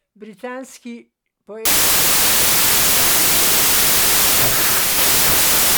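Wrong sample width hits the speech from 1.65 s: mismatched bytes bury it in loud noise at 0.667 speed, fitting 24-bit data read as 16-bit.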